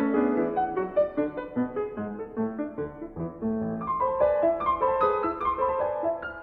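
No technical faults can be heard anywhere in this music clip. Nothing in it calls for a time mark or a description.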